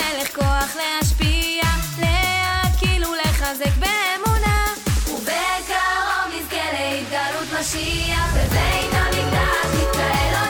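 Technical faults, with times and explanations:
3.68 s, dropped samples: a single sharp click. Likely a handful of samples went missing, so the waveform jumps abruptly to a later value.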